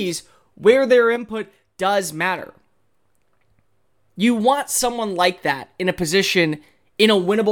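Speech, and at 1.16 s the level drops abruptly by about 6 dB, with the voice and the background noise falling together in a single step rather than fading. It stays at that lower level until 2.39 s, where it snaps straight back up. This is a sudden gain jump, likely from a digital gain setting or bit shift being applied instantly from one sample to the next with no ramp, so the change lands as a hard step in level.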